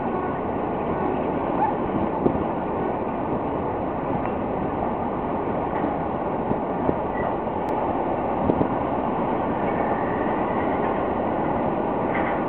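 From 7.69 s to the end, every sound arrives twice: a second full-band copy trails the first by around a tenth of a second, somewhat quieter, with no decay or room colour, so it reads as a hard slapback rather than an echo. It switches on abruptly at 7.69 s. This is a doubled audio track, likely from the same signal being captured again through a slower path and mixed back in out of step.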